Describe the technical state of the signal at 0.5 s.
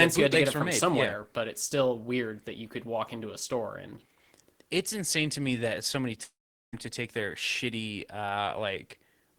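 At 0.5 s the signal is intact, with no fault audible at that moment.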